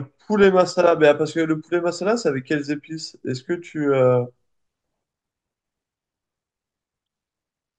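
At 0.43 s there's a brief bit of DAB burbling, and it comes back from 7.06 to 7.13 s. Weak reception lets bit errors slip past the error correction into the MP2 data, at a rate of roughly 0.1 to 0.15 percent, so corrupt samples put short noise blips in single sub-bands and corrupt scale factors make sub-bands jump in level for up to a frame. You hear it as short blips of noise over the speech, and the later one sounds like it spans a few frames.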